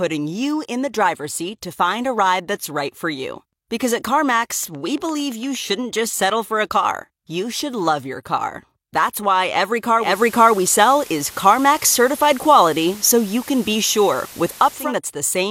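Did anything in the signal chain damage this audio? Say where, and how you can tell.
Yes. Interference reached the analogue wiring or a struggling interface, likely injecting a train of clicks from 4.40 to 5.56 s, ending just before "shouldn't just settle for". There are about ten evenly spaced pulses at 8.7 per second, peaking near the speech level and ticking over the sound.

At 9.97 s, just after "why every", the hybrid radio receiver lost its digital signal and began digital radio blending to analogue, cross-fading to FM over 232 ms. Until 14.94 s, hiss sits roughly 20 dB under the speech and the level shifts by about 4 dB.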